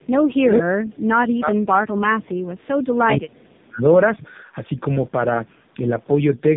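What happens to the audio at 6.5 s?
Tandem speech coding is present at 6.5 s, as throughout. Two speech codecs in a row compounded each other's damage. The sound is rough, warbly and muffled, with nothing above 3.6 kHz.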